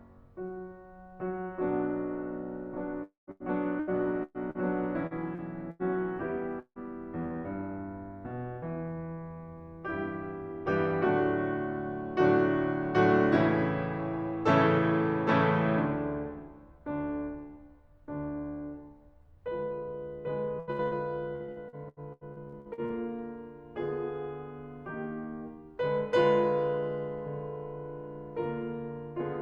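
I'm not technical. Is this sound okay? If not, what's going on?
No. Long network dropout at 3.03 to 3.30 s and 6.60 to 6.79 s: the music smears into a fading buzz, then briefly goes silent, likely because audio stopped arriving for a moment.

Repeated packet loss (robotic sound) from 3.31 to 5.83 s and 20.60 to 22.93 s: small pieces kept going missing, each patched by repeating the last sound, so the music turns choppy with pieces missing.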